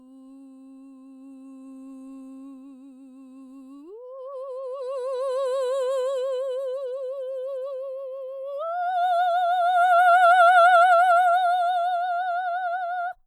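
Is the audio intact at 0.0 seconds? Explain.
Yes, the music is intact at 0.0 s, with no fault present at that moment.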